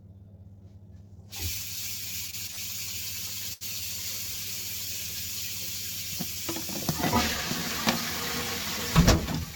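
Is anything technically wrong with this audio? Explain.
Yes. Between 2.27 and 2.59 s the sound drags and stutters, catching four times as it repeats itself, with the longest catch about 64 ms. This is repeated stalls (stutter): packets arrived late, so the jitter buffer emptied repeatedly and the receiver extended the last sound for 118 ms in total, over a third of that stretch, before resuming with nothing lost.

At 3.53 to 3.63 s one moment of sound is held too long, with a faint buzz or dip. This is a short stall from a late packet: a single packet arrived about 77 ms late, the buffer ran dry, and the last sound was stretched until playback could pick up exactly where it left off.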